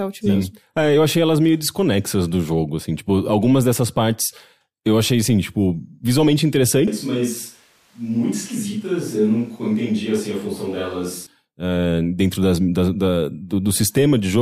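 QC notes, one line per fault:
6.88–11.27 s: switch to a distant microphone. The speech turns suddenly roomy and thin, about 5 dB quieter, likely a far mic standing in; the switch comes just before "uh dentro das da".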